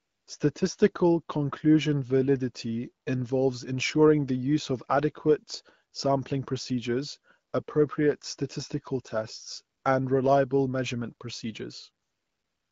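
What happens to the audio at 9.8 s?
From 9.77 to 9.83 s, AMR comfort noise takes over. The phone judged the talker silent and sent no speech frames for 60 ms. The receiver filled the gap with synthetic noise built from a coarse level and spectrum estimate. The real background briefly becomes a smooth, steady hiss.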